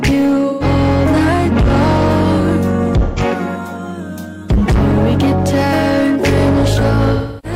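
Hard clipping runs throughout: the audio is overdriven by about 10 dB, flattening roughly a fifth of the waveform into square tops, heard as harsh fuzz and seen as dense high-frequency harmonics. AAC frame loss with concealment appears at 0.48–0.64 s and 3.04–3.20 s as smeared, phasey patches of guessed spectrum, then from 7.14 s to the end, where the concealment decays toward silence, visible as a fading spectrogram block.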